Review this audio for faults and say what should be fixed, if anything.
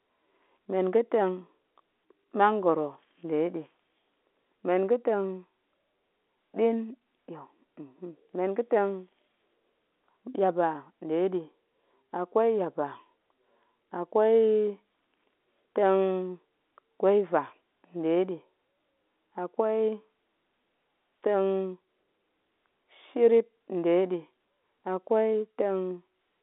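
Nothing stood out on listening to this speech, which reaches the ear through a G.711 telephone line band of about 250 Hz to 3.6 kHz, so there is nothing here that needs fixing.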